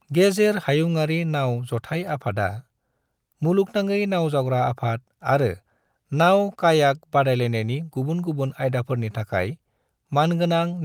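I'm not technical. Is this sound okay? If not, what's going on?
Yes, there are no technical problems with this recording.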